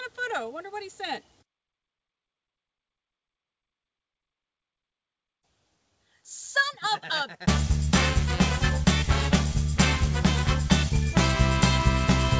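No technical faults can be heard anywhere in the clip. It has gone through a call path whose wideband codec leaves nothing above 8 kHz, which fits G.722.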